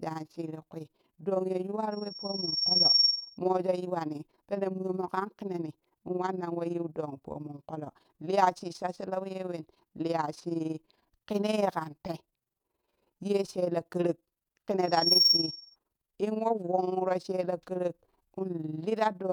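A rough, robotic flutter runs through the whole speech clip, the level dipping and swelling by about 11 dB some twenty times a second. This is overlap-add ripple: the audio was split into windowed frames and rejoined with an overlap that fails to sum to a constant gain, so loudness pulses once per frame.

From 1.91 to 3.38 s, a piercing 5.5 kHz tone swells over roughly a second until it sits around 10 dB above the speech. It returns from 14.81 to 15.76 s, climbing faster, in about a third of a second. This is loudspeaker feedback squeal: a microphone picked up its own loudspeaker, loop gain at 5.5 kHz exceeded one, and that frequency fed on itself.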